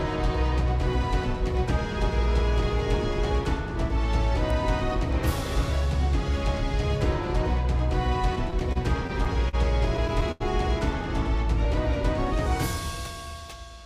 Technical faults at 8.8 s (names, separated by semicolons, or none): repeated stalls (stutter)